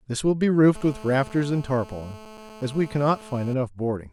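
A hard, raspy buzz at about 217 Hz, rich in harmonics, runs steadily under this speech clip from 0.75 s to 3.54 s, about 21 dB below the voice. It is GSM phone buzz: a nearby 2G phone on a call transmits in bursts, and the audio circuit rectifies those radio pulses.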